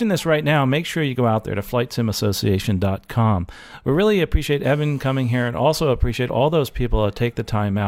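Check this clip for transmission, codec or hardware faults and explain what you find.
One fault is present. From 4.64 to 5.48 s there is GSM phone buzz. A nearby 2G phone on a call transmits in bursts about 217 times a second. The audio circuit rectifies those pulses into a steady, raspy 217 Hz buzz with many harmonics. It sits about 32 dB below the speech.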